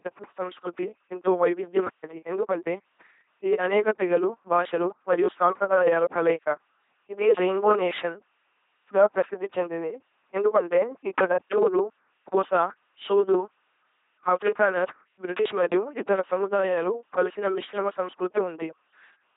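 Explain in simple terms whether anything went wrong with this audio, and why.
The whole speech recording has passed through an LPC-10 vocoder. It rebuilds each moment from either a buzz or a hiss shaped by a simple filter, so the voice comes out robotic and buzzy throughout, heavily damaged, with nothing above 3.8 kHz.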